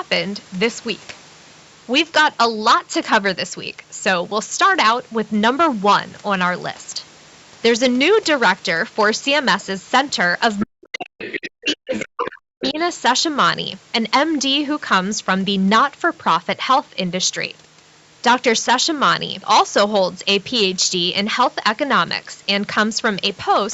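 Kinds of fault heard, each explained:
Hard clipping: the signal is driven about 10 dB past what the chain can pass, so a few percent of samples get flattened. On a waveform the loud peaks show squared-off tops. A spectrogram shows harmonics smeared up toward the 8 kHz ceiling, and they are heard as a constant harsh fuzz on louder syllables.
Other side's voice leaking through: from 10.59 to 12.83 s a second, fainter voice sits under the main talker, roughly 15 dB down. This is likely loudspeaker echo the canceller failed to remove. It shows as a separate harmonic pattern overlapping the main one on a spectrogram.
Speech suppressed in double talk: between 10.65 and 12.78 s the talker's own voice repeatedly dips, at worst by around 40 dB, for about a second and a half in total. This is likely the canceller turning everything down while both sides spoke. The waveform shows pinched, gapped envelopes and the spectrogram shows patchy dropouts.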